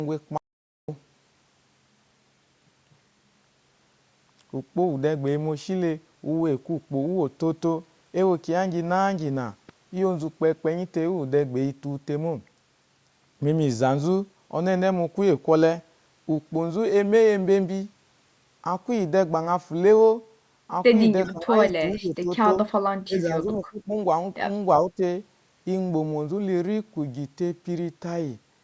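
At 0.38 s the sound cuts out to silence and returns at 0.89 s, a gap of about 0.51 s. This is an audio dropout to silence. No room tone or noise floor survives inside the gap, so the recording chain was writing silence rather than a quiet input. A momentary loss of the input signal, such as a dropped link or device, is the likely cause. Whatever occurred during that half second is absent.

From 21.25 s to 21.33 s there is a brief echo leak: a faint delayed copy of the speech trails the original by 386 ms, sitting roughly 25 dB below it. It is a short fragment rather than a sustained echo, and most likely comes from the far end's loudspeaker path where its echo canceller did not fully remove the returning signal.

Overlapping that and continuing afterwards, the speech is suppressed in double talk in five places: 21.28–21.54 s, 21.90–22.31 s, 23.06–23.48 s, 23.69–23.93 s and 24.91–25.02 s. 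In each the level sags, by roughly 10 to 15 dB in most, and by about 25 dB in the dip at 23.69 s. The pattern fits an echo canceller that likely ducked the near talker while the other side was also speaking. The band-limiting of the call processing, with nothing above 8 kHz, is present throughout.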